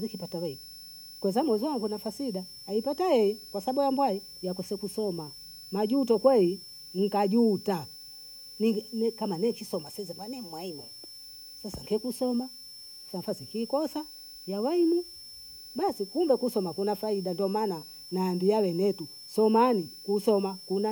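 A switching power supply is running in an audible mode throughout, laying a thin whistle near 5.3 to 5.4 kHz, roughly 20 dB below the speech.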